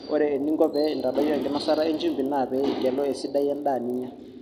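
From 0.36 s to the end, the resampler restarted on every block, apparently 20 ms blocks in a 24 kHz to 48 kHz conversion, leaving a 50 Hz buzz under the speech.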